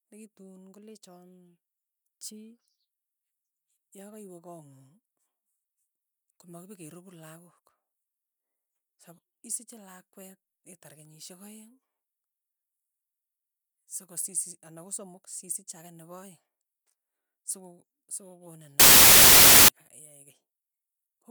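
Samples built from the wrong bytes, from 18.80 to 19.68 s: the bytes of each sample are combined in the wrong order or alignment, so the rapidly changing low bits land in the high positions. For almost a second the speech becomes loud, harsh broadband noise.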